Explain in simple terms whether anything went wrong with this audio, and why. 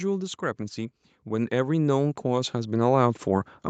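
Something did go wrong: automatic gain rising. From about 0.58 s to 3.56 s the call's level control decided the speech was too quiet and slowly turned it up, so everything grows noticeably louder over those three seconds. What sets this apart from a speaker simply leaning closer is that the background noise swells right along with the voice, and the change is a smooth, steady climb rather than a sudden jump.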